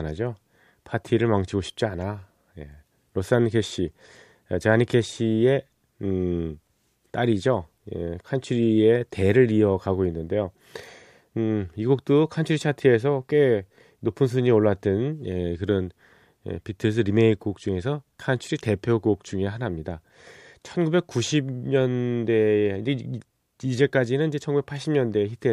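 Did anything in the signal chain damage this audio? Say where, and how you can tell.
No, nothing in the signal chain has damaged this speech recording, and no stage shows any sign of having altered the signal.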